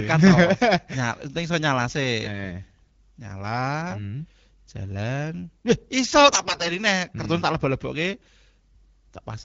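A speech clip carried over the AMR wideband (HD Voice) codec at around 12.65 kbit/s, which keeps it clear, turns hoarse, scratchy and gargly from 6.24 to 6.77 s. These are AMR bit errors: on a weak link, flipped bits, around one in ten, corrupt the excitation pulses and the finer pitch, gain and spectral values across about two dozen frames. Unlike packet loss, nothing drops out or goes silent, and pitch and level roughly hold.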